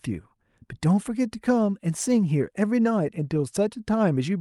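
From 1.36 to 2.40 s, a block size mismatch (truncated) discards the end of each block, putting a buzz at 100 Hz on the speech while its pace stays normal.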